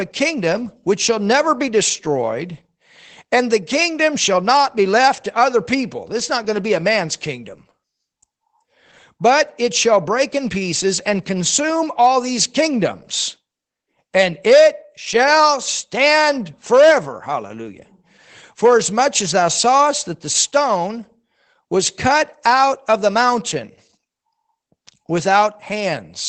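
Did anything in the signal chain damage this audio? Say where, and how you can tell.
Yes, at the codec: Opus voice compression throughout removes everything above 8.9 kHz. Its coarse excitation coding leaves the speech muffled, hoarse and slightly robotic, which fits about 12 kbps.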